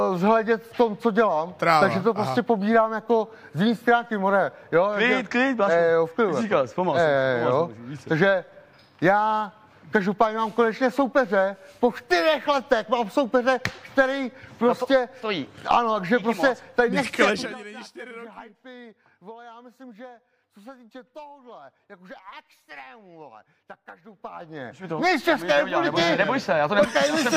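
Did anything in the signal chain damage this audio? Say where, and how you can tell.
Yes, zipper noise from an unsmoothed gain stage: ticking at 17.21–17.58 s (about 20 dB down) and slower ticking at 23.96–25.17 s (about 20 dB back up) as the level moves in 2 dB steps.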